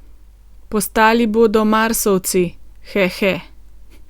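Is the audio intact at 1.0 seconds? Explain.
Yes, the audio is intact at 1.0 seconds, with the speech running through that moment without any dropout, click or other fault.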